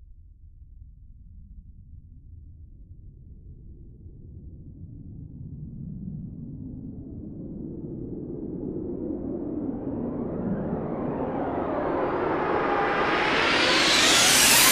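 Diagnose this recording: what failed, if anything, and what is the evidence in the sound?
Nothing in this recording points to a failure at any stage of the chain. No event in the audio gives evidence of a problem in the wiring, converter, buffer, format conversion, codec, network, storage or playback.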